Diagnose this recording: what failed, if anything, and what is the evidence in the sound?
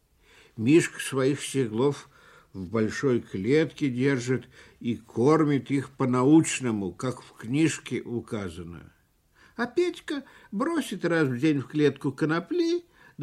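Nothing failed; no fault is audible anywhere in it.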